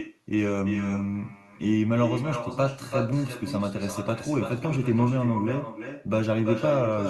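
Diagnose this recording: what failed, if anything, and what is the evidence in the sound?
Call processing: echo with no canceller. The far-end microphone recaptures its loudspeaker, so speech repeats throughout about 8 dB down, roughly 300 ms late, as trailing spectrogram streaks.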